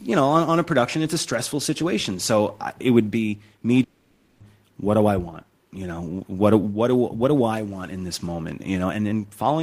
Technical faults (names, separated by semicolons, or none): long network dropout